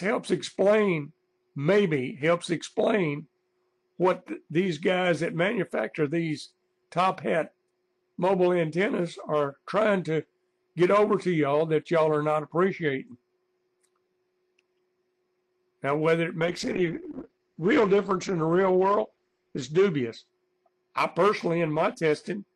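From 16.4 s to 20.37 s there is a call bitrate drop. The bandwidth estimate collapsed, and the encoder fell from 48 kbps to about 10 kbps, holding the lowest rate for 3.4 s. The coarser coding makes the sound rough and watery, and the audio band narrows from 20 kHz to 8 kHz, so it turns muffled. On a spectrogram, everything above 8 kHz disappears in that window, leaving a flat ceiling until the rate recovers.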